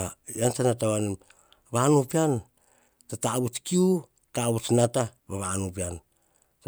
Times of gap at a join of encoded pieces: none

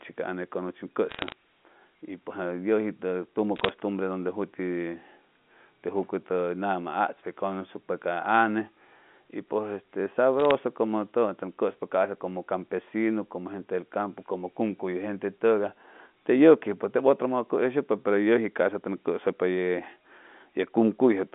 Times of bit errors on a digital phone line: 1.09-1.32, 3.56-3.69, 10.40-10.51

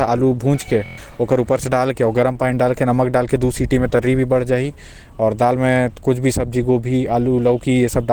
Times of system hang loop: 0.86-0.98

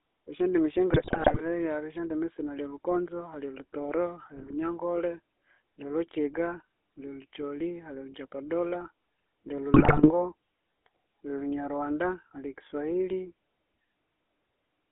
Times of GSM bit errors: 0.90-1.43, 4.36-4.53, 9.74-10.11

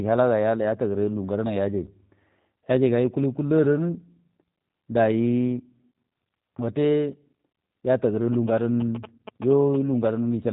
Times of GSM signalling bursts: 8.33-9.76

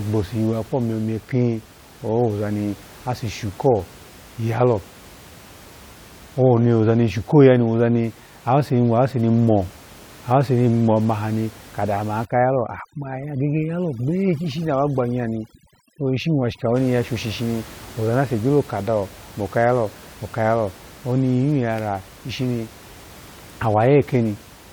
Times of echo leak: none

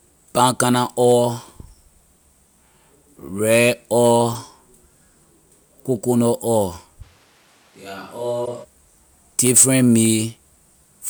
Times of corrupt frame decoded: 4.32-4.36, 8.45-8.48

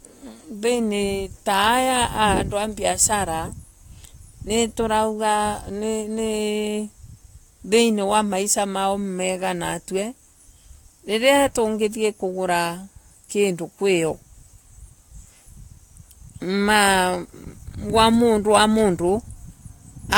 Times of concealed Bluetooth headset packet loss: none

